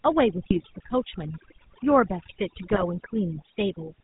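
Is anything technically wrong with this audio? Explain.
Yes. Three faults are audible.

Overdone noise removal runs throughout. Noise reduction set too hard pulls bands near the noise floor down. The background drops and breaks up into twinkling specks.

The GSM full-rate codec also runs throughout. It models the vocal tract with pulse excitation and passes nothing above 4 kHz. The speech has a plainly buzzy, gravelly roughness, consistent with 13 kbps GSM.

GSM bit errors hit at 0.50 to 0.59 s and 2.70 to 2.86 s. Corrupted filter, pitch or gain values distort individual frames. The speech breaks into squawks, pops and gargling.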